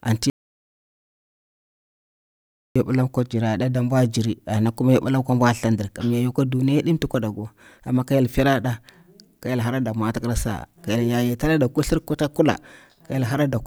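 At 0.30 s the speech cuts off abruptly and is replaced by an audio dropout to silence lasting about 2.46 s, until the sound returns mid-flow at 2.76 s with "yobila ko". The gap holds silence with no room tone, likely because the input was briefly lost while recording continued writing silence. On a waveform it is a flat line; a spectrogram shows a sharp-edged black band across all frequencies.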